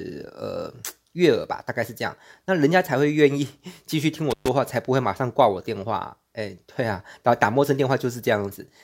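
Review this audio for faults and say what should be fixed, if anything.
A loose cable or plug in the signal chain briefly lost contact between 4.30 and 4.49 s, an intermittent contact fault. For about 124 ms the connection was open, so the speech drops out abruptly, and the unstable metal-to-metal contact as it breaks and remakes produces crackle at both edges of the gap. The fix is to reseat or replace the faulty lead or connector and re-record the affected passage. Using secured, strain-relieved cables with clean connectors prevents this.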